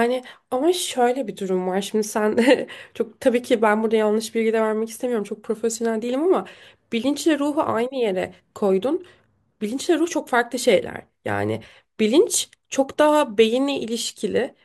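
No audible technical faults present.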